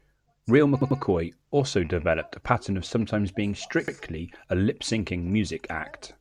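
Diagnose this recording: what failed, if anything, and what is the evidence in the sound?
A short stutter at 0.82 to 1.00 s replays a 93 ms slice twice before "also developed a pattern", and again at 3.88 s, once, after "pattern of sometimes being". This is repeated frames at the codec or storage stage: a single compressed frame was duplicated, adding 186 ms and 93 ms.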